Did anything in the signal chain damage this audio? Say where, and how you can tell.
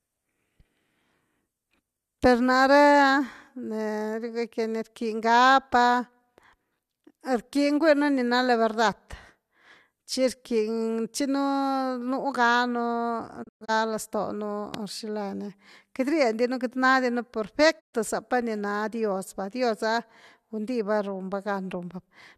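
Yes. A digital broadcast dropout hits the reception stage twice. At 13.42–13.70 s the speech breaks into short muted holes over about 240 ms, the longest 120 ms. At 17.79–17.95 s it goes silent just before "zapa ni na". Each mute fades over 20 ms. The waveform shows flat gaps, and the spectrogram shows blank vertical bands.

A loud pop at 14.74–14.77 s sits around 10 dB above the speech, which continues underneath. It is likely a voltage step from a plug, switch or static in the analogue wiring. The waveform shows one sharp spike, and the spectrogram shows a thin full-band vertical line.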